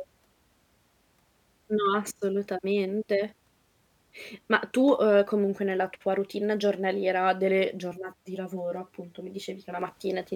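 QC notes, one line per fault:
7.94 to 9.82 s: channel delay (comb filtering). The speech suddenly turns hollow and phasey, then clears again. One channel arrives around 10 ms late and the two are summed to mono. Whatever the channels share cancels at evenly spaced frequencies. The first notch sits near 50 Hz, with further notches roughly every 100 Hz above it. These closely packed fixed notches thin the voice and give it a hollow colour.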